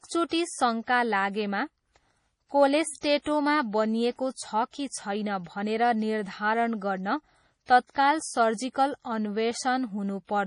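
Speech throughout, and it's been squeezed hard. Nothing comes through above 10.6 kHz, and the treble that does survive has that watery, swirly quality, with sibilants turning metallic and chirpy and consonant attacks smeared. That's heavy MP3 compression damage, likely from an encoder starved of bits, which fits a bitrate around 32 kbps. With so few bits it lops off the top band at a fixed cut-off and drops the weaker frequency lines, and they flicker in and out from frame to frame. There's also a pre-echo from 2.99 to 3.03 s: a short hiss creeps in about 47 ms before a sharp onset, and the attack itself lands soft. The codec spread the quantisation noise meant for the loud part across its whole block, so it leaked into the quiet gap just ahead of the hit.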